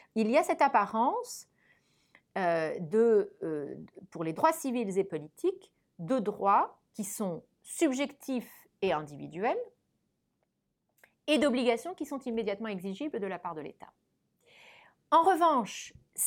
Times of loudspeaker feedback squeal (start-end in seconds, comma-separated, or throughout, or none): none